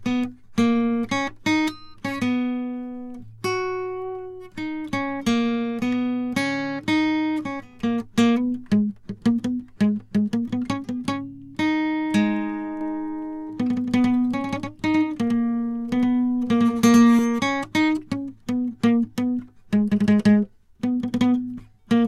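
From 12.81 s to 17.19 s the music carries a doubled audio track: a second full-band copy trails the original by roughly a tenth of a second, a few decibels quieter. Unlike an echo or reverb, it has no decaying tail or room colour, and it cuts in and out abruptly at those edges. The likely cause is a second, slower capture path mixed in alongside the direct one.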